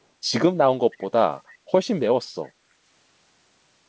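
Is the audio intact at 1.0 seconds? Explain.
No. From 0.92 to 1.06 s, a faint echo leak is audible. A delayed copy of the speech returns about 322 ms behind the original. It is very quiet, far below the direct speech, and lasts only a brief scrap. The likely cause is a far-end loudspeaker whose echo canceller let part of its microphone pickup through. That residue was sent back down the call, so the talker's own speech comes back as a late ghost.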